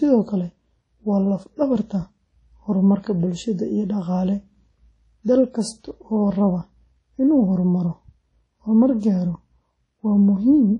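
Throughout the speech, the audio rings and sounds washy, with a hiss that swells and fades with the signal and nothing above 10.1 kHz. That points to likely WMA compression at a low bitrate around 32 kbps. Unlike a plain low-pass filter, the long transform blocks smear noise across tens of milliseconds.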